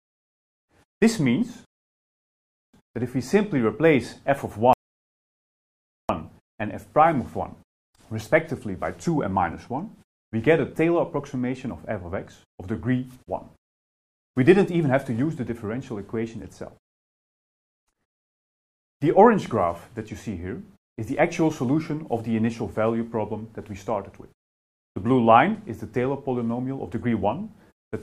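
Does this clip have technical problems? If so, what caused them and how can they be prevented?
Yes: rebuffering stalls at 1.65–2.74 s and 4.73–6.09 s. Playback ran out of downloaded audio and paused until more arrived. Unlike a dropout, nothing is skipped, because the sound resumes exactly where it stopped. A larger startup buffer or a lower streaming bitrate would prevent it.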